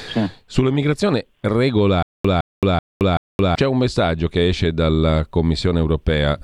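From 2.03 to 3.55 s the playback likely stalled and kept retrying, each time replaying its last buffered fragment before running dry: a stutter with silent gaps. The speech is replaced by one 162 ms burst repeated four times, each followed by about 220 ms of dead digital silence, so the same sliver returns every 382 ms in a mechanical rhythm. Whatever was said in that stretch is lost, and normal speech resumes with "c'è un messaggio che".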